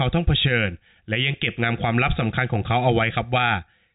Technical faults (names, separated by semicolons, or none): none